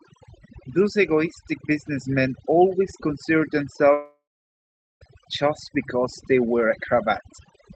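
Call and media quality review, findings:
Background dropped, with twinkling specks throughout. Overdone noise removal: suppressor set too strong, dropping individual bands near its noise estimate along with quiet speech detail.

3.93–5.03 s: decaying buzz or hiss fill, then about 0.79 s silence; speech resumes with about 1.08 s lost. Likely long network dropout; receiver concealment extended the last sound, then gave up.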